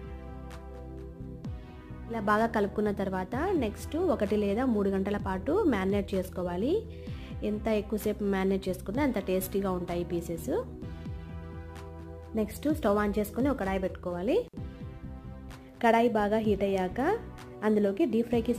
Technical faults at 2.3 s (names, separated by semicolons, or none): none